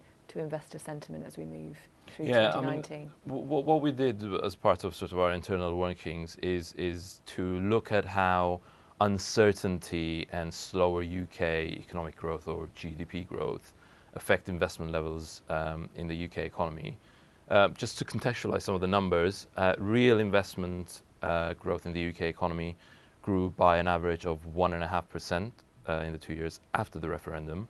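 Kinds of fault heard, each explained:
No kinds of fault are heard in this speech clip.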